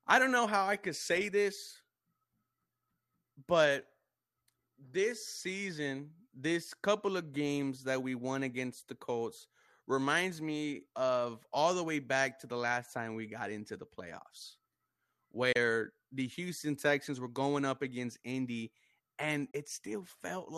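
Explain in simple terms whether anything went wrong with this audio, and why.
The speech briefly drops out twice, at 15.52 to 15.56 s and 19.51 to 19.55 s, each a tiny gap after a very quick fade. This is a digital broadcast dropout: the receiver lost a moment of signal, likely one frame of about 24 ms, and muted until it recovered.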